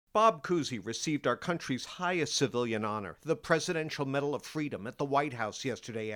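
Nothing is technically wrong with this speech recording, so there are no times or causes to give.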